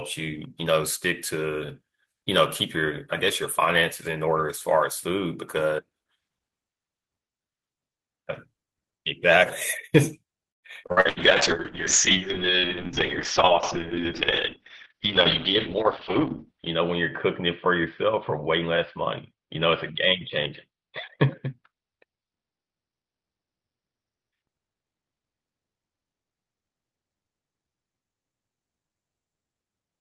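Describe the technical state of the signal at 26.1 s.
A call bitrate drop runs from 10.91 to 29.69 s: the encoder falls from 32 to 6 kbps, bandwidth narrows from 20 kHz to 6 kHz, leaving speech coarse and muffled.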